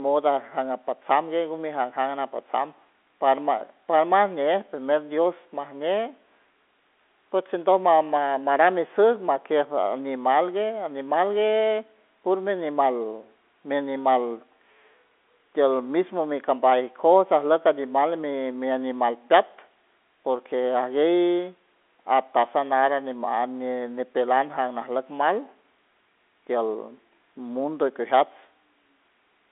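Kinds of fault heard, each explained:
No fault can be heard anywhere in the speech. The G.711 telephone coding is working as it should, holding the sound to a line band of roughly 250 Hz to 3.6 kHz with nothing above 3.8 kHz, and its own quantisation noise is faint at most.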